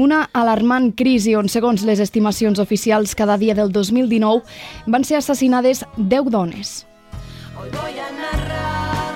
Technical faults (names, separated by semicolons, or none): none